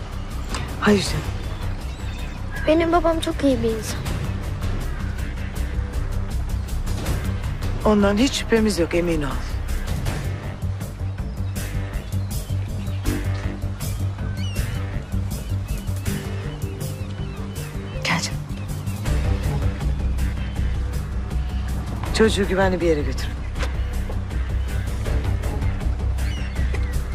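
Nothing is technically wrong with this audio.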